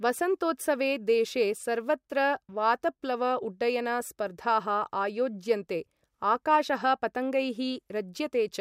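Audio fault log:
Nothing to log here, as the speech comes through without any fault showing up anywhere along the way.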